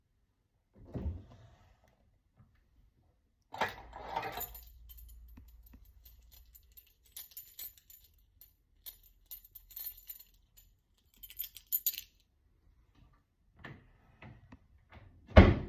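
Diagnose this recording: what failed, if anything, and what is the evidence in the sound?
Nothing failed in this recording, and the sound gives no evidence of any fault at any stage.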